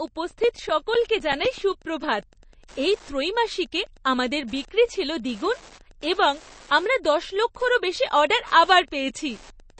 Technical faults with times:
0.00-9.80 Wi-Fi interference
0.00-9.80 MP3 compression
0.31-1.71 CD scratch ticks
5.35-6.24 CD scratch ticks

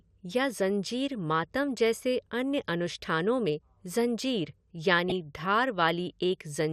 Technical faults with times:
0.00-6.73 MP2 compression
5.09-5.12 DAB burbling

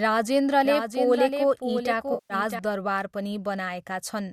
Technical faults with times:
0.65-2.59 doubled audio track
2.13-2.34 AAC frame loss with concealment

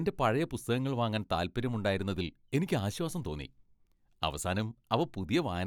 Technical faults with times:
none

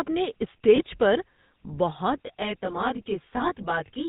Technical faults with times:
0.00-4.08 GSM full-rate codec
0.76-0.81 lost GSM frames
2.24-4.08 channel delay (comb filtering)

